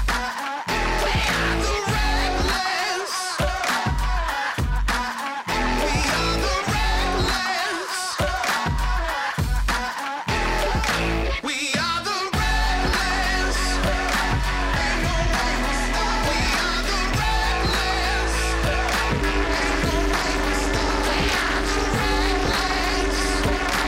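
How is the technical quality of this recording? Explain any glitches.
The recording has one clear fault near the end. From 19.10 s to 23.88 s there is overlap-add ripple: the audio was split into windowed frames and rejoined with overlaps whose gains don't sum evenly, so the level dips by about 60 dB once per frame, around 300 times a second. It sounds like a harsh, metallic buzz with extra tones around each note. Unlike dropouts, the dips are strictly periodic and unbroken.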